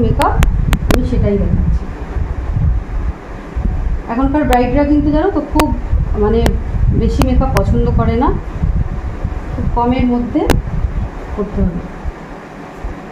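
Violent, sharp cracks burst from the loudest moments, a cluster from 0.22 to 0.94 s, then single snaps at 4.53, 5.60, 6.46, 7.22, 7.57 and 10.5 s. This is integer overflow: peaks up to about 3 dB over full scale wrap to the opposite sign instead of being limited.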